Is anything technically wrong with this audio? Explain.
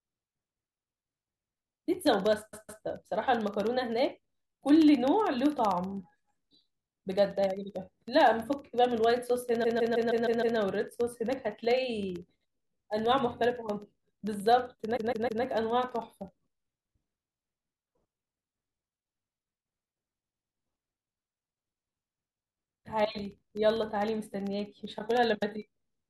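Yes. Periodic USB or driver dropouts run from 0.09 to 26.0 s. Every 64 ms, a tiny fraction of a millisecond of audio is blanked to silence, leaving regular ticks under the speech.

Repeated frames occur at 2.52, 9.63, 14.96 and 20.23 s. A block of about 157 ms (105 ms at 20.23 s) is replayed two to six times, causing a stutter and adding 0.31 to 0.94 s each, about 2.04 s in total.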